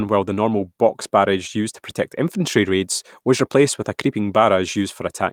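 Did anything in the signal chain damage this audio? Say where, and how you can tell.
No signal-chain damage heard.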